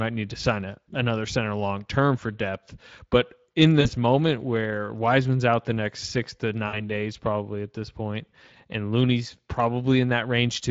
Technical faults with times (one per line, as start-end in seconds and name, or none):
0.00-10.70 Speex codec
3.81-3.87 VoIP packet loss concealed by the speech codec
6.67-6.80 VoIP packet loss concealed by the speech codec